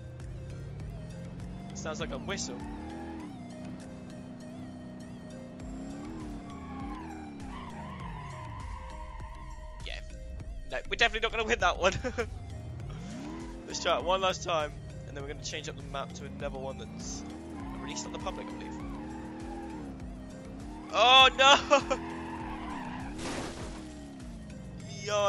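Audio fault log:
throughout: resampler restarted on every block. A steady tick at 10 Hz rides under the sound and stops in silence. Each 100 ms block was converted on its own, which fits 24 kHz to 48 kHz, leaving a small error at every block edge.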